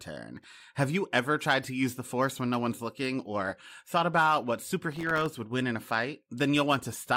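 The processor falls behind, missing around twenty sub-millisecond buffers over a short stretch and leaving tiny silent gaps in this speech. That is heard as processor overload crackle, a gritty burst from 0.37 to 0.64 s and again from 4.92 to 5.26 s, between "or thought about what" and "would win in a".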